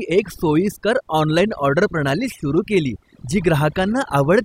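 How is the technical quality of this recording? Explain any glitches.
The quality is compromised by overdone noise removal running through the whole clip. The noise reduction was set too strong. It pulls individual frequency bands down whenever they sit near the estimated noise level. Quiet speech detail disappears with them. Pauses fall to near silence with twinkling specks.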